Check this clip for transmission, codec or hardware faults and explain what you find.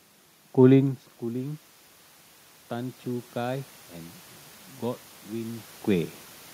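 Two faults stand out, both affecting level, and one also tone, rather than dropouts.

From 2.68 to 3.77 s the voice and the background swell together over about a second. This is automatic gain rising: after the input fell by about 13 dB, the gain control slowly added about 4 dB to compensate.

From 4.27 s to the end the sound turns duller and a little quieter, with nothing above 3.8 kHz, no gap at the change, and faint new background noise well beneath the voice. The likely cause is the input switched to a poorer device, whose narrower band and own noise take over.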